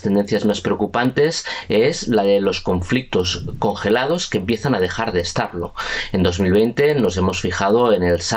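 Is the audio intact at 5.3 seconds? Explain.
No. At 5.3 seconds you're hearing the same thing that runs through the whole clip: the resampler restarted on every block. The sound was upsampled from 24 kHz to 48 kHz in separate 50 ms chunks, so at each chunk edge the converter had silence or the wrong end of the block where the real neighbouring samples should be. Each edge picks up a small glitch, giving a steady tick pattern at 20 Hz that's only there while sound is playing.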